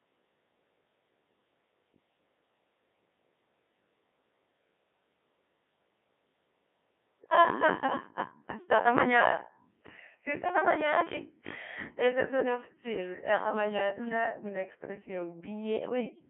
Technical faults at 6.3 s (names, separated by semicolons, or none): Codec 2 vocoder